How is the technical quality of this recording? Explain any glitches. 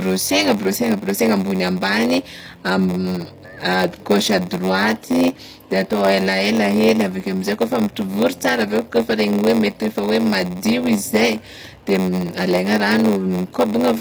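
The technical quality is poor. Two faults run through the whole speech recording.

Throughout, the treble sounds gritty and lispy. This is likely HE-AAC compression at a low bitrate, with treble rebuilt from copied lower bands.

Also throughout, a steady 93.8 Hz buzz sits under the speech, which runs slower at 0.938 times speed. This is a padded block size mismatch: short blocks are zero-filled to fit a 512-sample read size.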